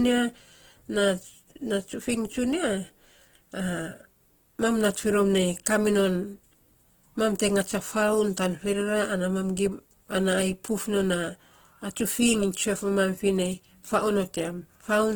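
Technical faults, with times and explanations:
Throughout: Opus compression, likely the cause of the rough, grainy texture across the speech. The damage is plainly audible. Harmonics come out noisy rather than clean, but the spectrum has no obvious holes and little swirling. That points to the codec's music (CELT) mode keeping each band's energy and filling starved bands with folded or noise content, which fits a low bitrate of about 16 kbps. Bandwidth stays full, with content reaching about 20.1 kHz.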